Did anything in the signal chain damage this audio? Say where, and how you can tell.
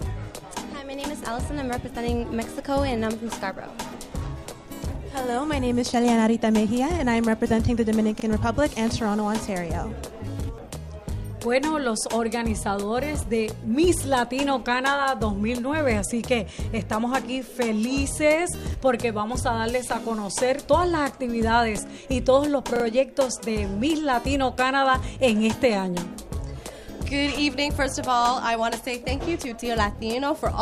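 Yes: a repeated buffer at the driver or buffer stage. One piece sounds twice at 8.20–8.24 s and three times at 22.76–22.84 s, fitting a 40 ms buffer replayed when new audio came late. Waveforms show identical blocks; spectrograms show vertical seams at each hard join.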